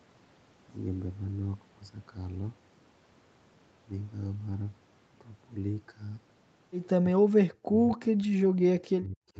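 A speech clip where the talker is pulled down by roughly 40 dB from 7.01 to 7.75 s and again from 7.92 to 9.37 s, likely speech suppressed in double talk. Unlike packet loss, the level sags and chops in pieces across whole stretches rather than leaving clean, instant gaps.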